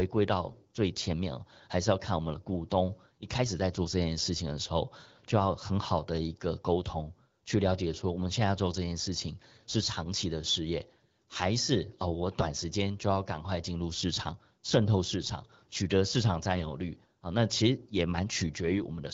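Speech clip with two brief hoarse, gargly bursts, from 0.47 to 0.56 s and from 16.56 to 16.64 s, where pitch and level hold but the texture turns scratchy. These are AMR bit errors: a few percent of the weakly protected bits in roughly four frames of the AMR-WB stream arrived flipped, misplacing excitation pulses and skewing fine pitch, gain and spectral values.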